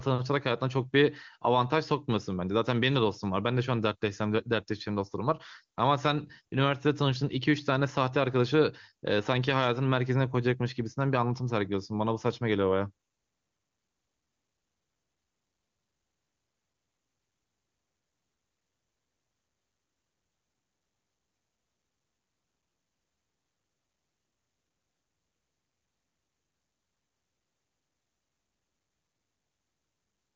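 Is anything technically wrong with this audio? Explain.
No, nothing's wrong here: it's speech carried over the AMR wideband (HD Voice) codec at its top rate of 23.85 kbit/s, where any trace the codec leaves is faint at most.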